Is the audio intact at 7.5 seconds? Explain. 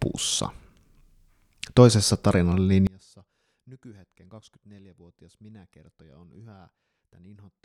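No. From 2.87 s to the end of the clip, the speech collapses by about 31 dB into a faint residue. The likely cause is one channel inverted: one stereo side has reversed polarity, so when the two are summed to mono, the centred voice and its low end cancel, leaving only the small differences between channels.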